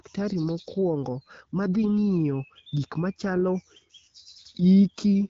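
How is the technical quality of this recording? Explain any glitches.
The recording has one audible glitch, a short burst of damage in the middle of the speech, carried over an AMR-WB (HD Voice) link whose coding at around 12.65 kbit/s adds only light colouring.

AMR bit errors, 1.83 to 1.90 s: for about 80 ms, which fits four 20 ms codec frames, a few percent of the weakly protected bits arrived flipped while the checksum on the critical bits still passed. The decoder then placed its excitation pulses wrongly and used slightly wrong pitch, gain and spectral values, so the speech keeps roughly its pitch and loudness but briefly turns hoarse, scratchy and gargled.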